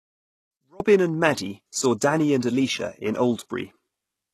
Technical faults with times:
0.00-4.34 HE-AAC compression
0.00-0.80 one channel inverted

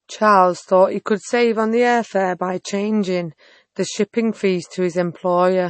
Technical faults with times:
0.00-5.69 MP3 compression

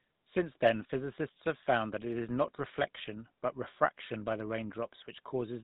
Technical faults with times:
0.00-5.63 GSM full-rate codec

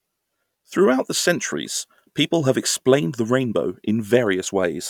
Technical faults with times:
none

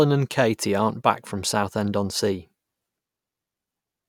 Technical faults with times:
none

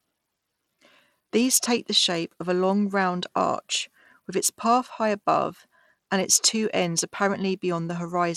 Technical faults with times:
0.00-8.36 Bluetooth SBC compression

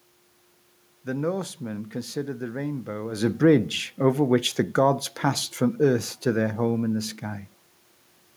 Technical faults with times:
3.13-7.10 automatic gain falling

